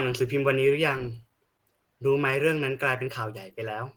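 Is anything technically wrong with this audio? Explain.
Yes. Opus compression, likely the cause, runs throughout the speech. Hybrid mode models the lower band with a speech coder and fills the starved upper bands with shaped noise at what fits about 16 kbps, so the speech sounds plainly hoarse and grainy, despite content reaching 20.1 kHz.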